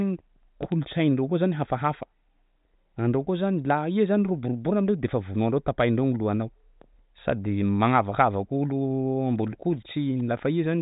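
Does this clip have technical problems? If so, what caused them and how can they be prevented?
No, nothing here needs fixing or preventing; the speech comes through a G.726 ADPCM path at 40 kbit/s with the band ending near 3.8 kHz, as that telephone codec intends.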